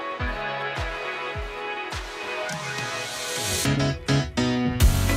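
A faint, steady ticking runs under the audio for its whole length, about ten clicks a second and roughly 35 dB below the main signal. This is Wi-Fi interference: a nearby Wi-Fi radio's beacon, repeating every 102.4 ms, is being rectified by the audio circuitry.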